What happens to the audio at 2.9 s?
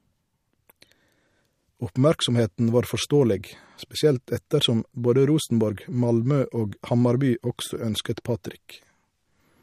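At 2.9 s the speech sounds watery and swirly, with metallic chirps on s sounds, smeared attacks, and nothing above 15.2 kHz. The damage is plainly audible and runs through the whole clip, not just this moment. The likely cause is MP3 compression at a bitrate that fits about 48 kbps. Short of bits, the encoder cut the treble at a fixed frequency and dropped weak frequency lines, which flicker on and off from frame to frame.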